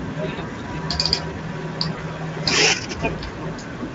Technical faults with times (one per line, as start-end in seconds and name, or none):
0.33-0.39 VoIP packet loss concealed by the speech codec
1.95-1.99 VoIP packet loss concealed by the speech codec